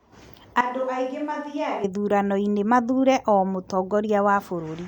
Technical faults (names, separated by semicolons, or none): switch to a distant microphone